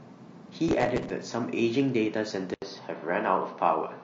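Throughout, the speech sounds rough and grainy. Noise fills the gaps between harmonics, and the top band sounds thin and synthetic. This likely comes from low-delay AAC compression such as AAC-ELD. Its short frames resolve pitch poorly, and the damage fits a bitrate near 32 kbps.

From 0.69 to 1.1 s, a gritty crackle tears across the speech. This is processor overload crackle. Many short buffers, around 5 ms each, miss their deadlines in a row. Each gap is filled with stale audio that has hard edges.

At 2.54 s, the sound drops out for 80 ms. When it returns, it is duller and boxier, with nothing above 6.3 kHz. A faint new hiss sits far below the speech, and the level stays about the same. This is likely an input switched to a poorer device.

From 2.99 to 3.03 s, a brief smeared, phasey patch appears. This is AAC frame loss with concealment. About 30 ms of audio went missing, which points to a single lost frame. 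The decoder rebuilt it from the last good spectrum.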